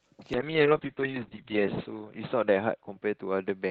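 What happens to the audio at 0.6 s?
A call bitrate drop is under way at 0.6 s, running from 0.34 s to the end. The encoder was forced to code with far fewer bits, consistent with a fall from about 32 to 6 kbps. The speech sounds rough and muffled, with the upper band cut from 8 kHz to 4 kHz.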